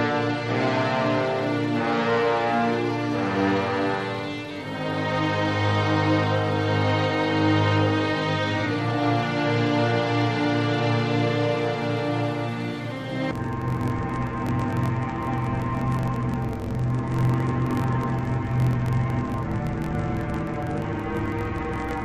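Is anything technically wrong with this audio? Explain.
Yes. From 13.31 s to the end at about 22.05 s, the audio sounds like interleaved audio read as planar. Each block of about 21.77 ms holds alternating left and right samples, but the first half gets treated as left and the second half as right. Each half then plays stretched to the full block, so the pitch drops an octave while the overall pace stays normal. With blocks this short, it comes across as dull and robotic, with a buzz at about 45.9 Hz.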